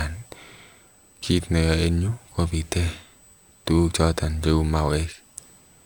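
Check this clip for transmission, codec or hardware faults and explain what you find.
One hardware fault runs through the whole speech clip. Throughout, a faint fixed whine at 8 kHz sits well below the speech. This is USB whine, the bus's 125-microsecond microframe current leaking in through power or ground.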